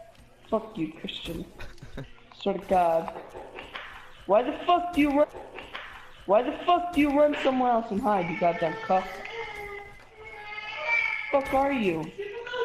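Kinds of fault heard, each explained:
Stream segment repeated: the player queued the same chunk of the stream twice, so about 2.0 s of audio, from 5.23 s to 7.22 s, plays again after a small blip at the jump back. Unlike a stutter or loop glitch, the repeat is a whole stretch of programme, not a short buzzing fragment.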